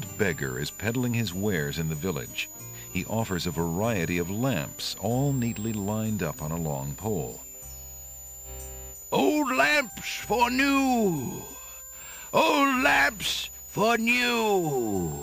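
A switching supply whistle runs through the whole audio. It sits near 7 kHz, wandering between 6.7 and 7.6 kHz, roughly 15 dB below the signal.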